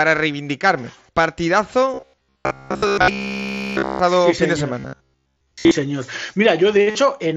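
From 1.94 to 3.99 s, and again from 4.80 to 5.71 s, fresh audio was likely arriving too seldom, so the playback side kept looping its last short buffer while the real audio was skipped. This is robotic sound from repeated short buffers. The loops repeat about every 15 ms, which fits a 15 ms buffer and stamps a fixed 66.7 Hz buzz onto the speech. In the first stretch virtually all of the audio is repeated, giving a rigid metallic buzz that only loosely tracks the speech. In the second, most of it is looped, so a bit more of the natural contour survives under the buzz.

At 6.90 to 6.95 s, concealed Bluetooth headset packet loss drops about 45 ms of audio between headset and phone, which fits a handful of lost packets. The receiver bridges the gap by continuing the most recent waveform, so a brief buzzy, held tone sits at full level, with a slight warble as real speech resumes. Throughout, the mSBC headset link limits the speech to 8 kHz and adds a light graininess on louder sounds.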